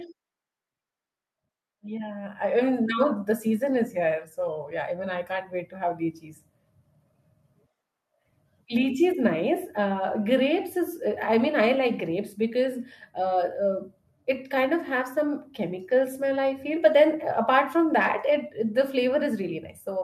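A speech recording with one fault: automatic gain rising between 1.67 and 3.1 s. Over that stretch of roughly a second and a half, the gain control decided the input was too quiet and pushed its gain up by about 7 dB, so the voice and the background noise swell together rather than the speaker getting louder. On a waveform the envelope widens steadily across that span, and a spectrogram shows every band, the noise floor included, brightening at once.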